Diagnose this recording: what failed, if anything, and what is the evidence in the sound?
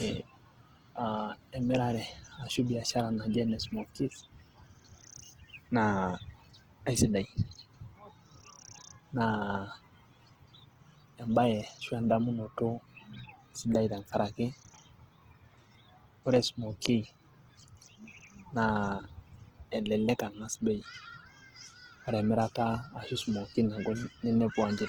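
The codec stage failed: the speech carries plainly audible compression damage from start to finish. Rather than swirling or dropping out, the voice sounds grainy and rough, with its tonal parts smeared into noise, while the spectrum still extends to about 20.2 kHz. That full-band, noise-filled texture is the likely result of Opus compression in its music mode: starved of bits, near the low rate of 16 kbps, the encoder preserves each band's energy but fills the detail with folded or synthetic noise.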